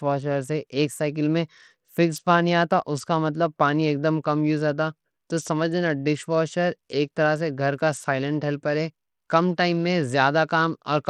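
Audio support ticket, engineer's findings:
Whole clip, start to finish: treble thin and flickery, gritty grain riding on the speech. Plainly audible. Likely Bluetooth SBC compression on the link, at a starved bitpool, which fits something around 80 kbps. The top sub-bands are getting few or no bits and the rest is coarsely quantised, hence the dropouts up high plus the aliasing fizz. Worth checking the codec negotiation.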